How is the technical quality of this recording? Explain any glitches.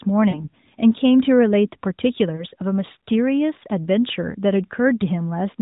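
Two brief glitches mar this narrowband phone-quality speech, which carries light, slightly synthetic AMR-NB coloring below a hard 4 kHz ceiling. From 0.30 to 0.48 s and again from 2.36 to 2.44 s, the sound smears and dips before recovering. These are lost AMR speech frames, about 40 ms and 20 ms of corrupted data. The decoder bridged each gap by repeating the last good settings at fading level.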